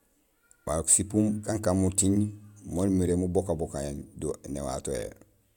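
Speech recording with no audible technical faults.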